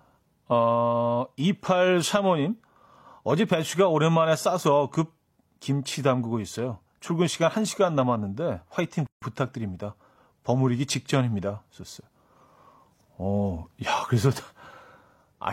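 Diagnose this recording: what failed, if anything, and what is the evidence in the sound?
Gap at a join of encoded pieces, a codec stage fault: a 150 ms gap from 9.07 to 9.22 s, after which the speech resumes exactly where it stopped, unlike a dropout.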